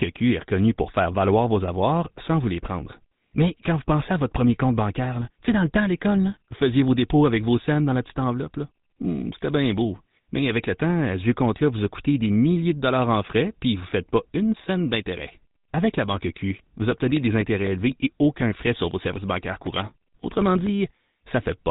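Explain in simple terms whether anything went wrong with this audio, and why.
The whole recording went through the GSM full-rate codec, an old mobile-phone system: the voice sounds buzzy and gravelly, unlike plain muffling, and nothing above 3.8 kHz survives.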